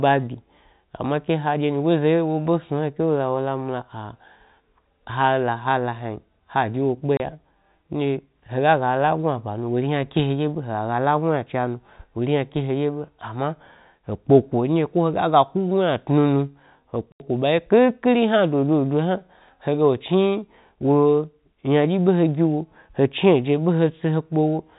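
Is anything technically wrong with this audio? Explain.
Yes. There is packet loss filled with silence: the speech drops to dead silence for 30 ms at 7.17 s and for 80 ms from 17.12 s to 17.2 s, with hard edges. Both gaps are multiples of 10 ms, which fits 10 ms packets. Unlike concealed loss, nothing is repeated or smeared across the hole. The narrow telephone band, with nothing above 4 kHz, comes from the G.711 coding.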